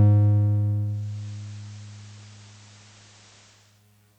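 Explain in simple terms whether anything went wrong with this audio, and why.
From 0.80 s to 3.87 s, the music goes through a digital radio blending to analogue: over about half a second the radio fades from its digital signal to the station's FM broadcast, so hiss appears and the sound turns slightly quieter, then fades back. The gradual fade and the arriving hiss set it apart from a sudden dropout.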